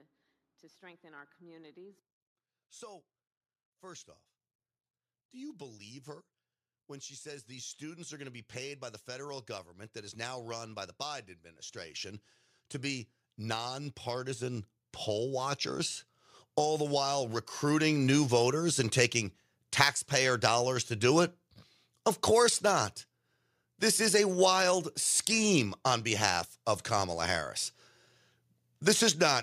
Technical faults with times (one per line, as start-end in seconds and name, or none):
5.31-18.76 automatic gain rising